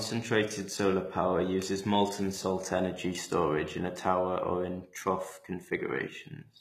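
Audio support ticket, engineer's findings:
HE-AAC compression, throughout. Treble gritty and metallic, s sounds lispy, no content above about 14.9 kHz. Likely HE-AAC at a low rate, consistent with 20 kbps: upper band rebuilt from copied lower bands, harmonics misaligned across crossover.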